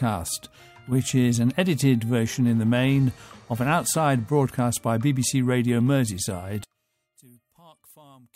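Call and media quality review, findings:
Sudden level collapse from 6.64 s to the end at 8.35 s, about 30 dB down in the mono sum; the remainder is a faint copy. One channel inverted, likely a polarity flip on one side of the stereo path, so shared content cancels when summed. Spectrogram: abrupt near-blank band from 6.64 s, faint residue only. Waveform: mono trace shrinks to a sliver.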